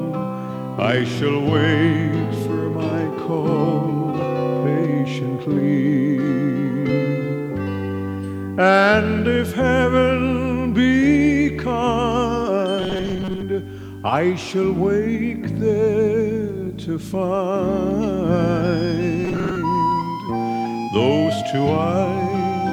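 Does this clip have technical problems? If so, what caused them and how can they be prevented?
Yes. Throughout, quiet passages sound gritty, with distortion that rises and falls with the sound, about 40 dB below it. This is likely low bit depth without dither, consistent with rounding to about 9 bits. Unlike added hiss, the grain follows the signal and stops when it does. Capture and process at 16 bits or more, and dither whenever reducing word length.

From 12.79 to 13.43 s and from 19.25 to 19.58 s, the audio turns into a rigid, metallic buzz at 188 Hz. This is likely robotic sound from repeated short buffers: a segment of about 5.3 ms is replayed while roughly half the real audio is skipped. Unlike dropouts, there are no silent gaps, just a fixed-rate buzz. Use larger buffers and ensure the audio thread is never starved.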